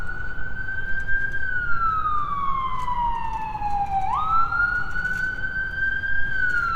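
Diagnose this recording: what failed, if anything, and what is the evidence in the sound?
Nothing failed; no fault is audible anywhere.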